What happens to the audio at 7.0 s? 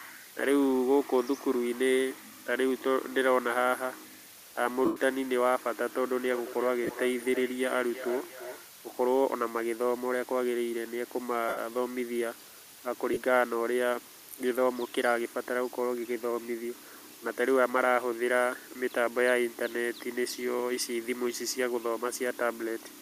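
At 7.0 s the clip is inside a feedback echo between two devices, running from 6.25 to 8.73 s. A second device in the room is playing back what the first microphone sent, and that microphone picks it up again. Neither echo canceller removes the other device's playback. The sound returns at a fixed interval of roughly 300 ms, peaking about 12 dB below the speech, and each pass is thinner and more ringing than the last.

Just before, from 6.84 to 6.91 s, lost LE Audio frames break the signal. About 37.5 ms of audio is missing, scattered over 60 ms, with the longest gap around 20 ms. That fits five 7.5 ms frames. The LC3 decoder fills each gap by repeating the last spectrum with random signs, so the sound briefly turns into a noisy, smeared burst instead of clean speech. These dropouts likely come from the Bluetooth LE Audio link.

Under all of this, low bit depth with dither is present for the whole clip. 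Only 7 bits are in use, and dither added before rounding turns the quantisation error into a steady, even hiss roughly 20 dB below the speech, with no added distortion.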